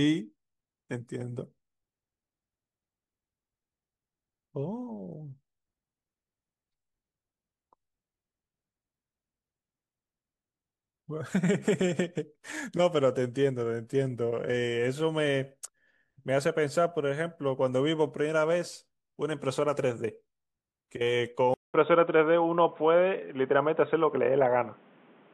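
At 21.54 s, after a 200 ms gap, the speech goes boxy, with nothing above 3.8 kHz and faint new background noise, likely from the input switching to a poorer device.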